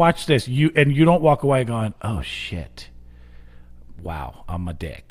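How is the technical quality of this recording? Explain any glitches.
One fault is audible in this speech recording. Mains hum appears from 2.23 to 4.13 s. A ground loop or nearby transformer leaks the 60 Hz supply in as a faint, steady low drone.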